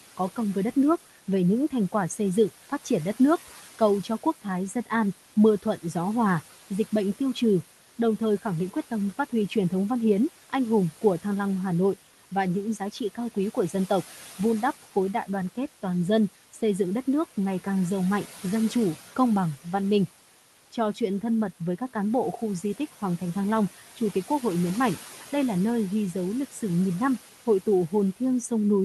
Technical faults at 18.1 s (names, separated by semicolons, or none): noise suppressor artifacts